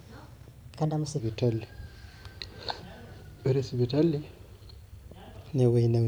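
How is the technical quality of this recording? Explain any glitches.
The recording has one fault, at the very start. From 0.0 to 1.2 s a section at the wrong speed plays 1.25 times too fast, likely from a clock or rate mismatch, so the speech sounds hurried and roughly four semitones high.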